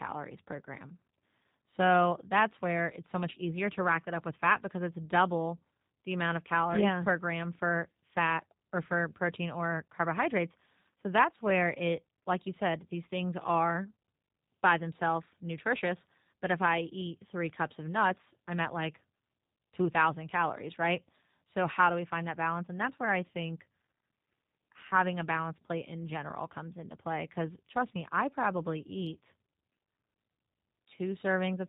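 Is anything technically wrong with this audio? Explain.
Yes. Throughout the speech, the sound is band-limited, slightly rough and synthetic, the plainly audible damage of the G.729 codec (G.729A). It rebuilds speech from a vocal tract filter, pitch prediction and a few pulses per 10 ms frame, which fits about 8 kbit/s, and passes nothing above 4 kHz.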